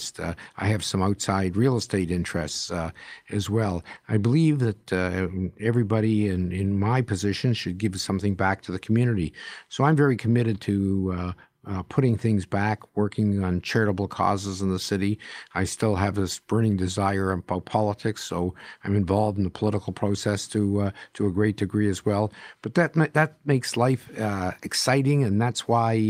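No technical faults are audible.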